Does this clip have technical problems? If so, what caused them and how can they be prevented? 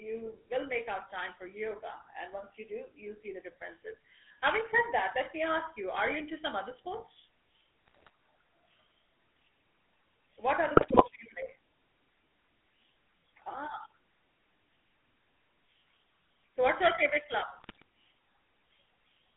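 Yes. GSM full-rate codec, throughout: the vocal tract is modelled and driven by sparse pulses, nothing passes above about 3.4 kHz, and the speech turns buzzy and gravelly. Preventing it means carrying the call over a wideband codec such as AMR-WB or a modern VoIP codec instead of the old full-rate scheme.

GSM bit errors, at 7.88–8.10 s after "into some other sports", 10.76–11.03 s after "what other", and 17.58–17.82 s after "what's your favorite club": corrupted filter, pitch and gain values bend the spectrum into squawks and gargling. A stronger radio link or better error protection and frame concealment would stop these bursts.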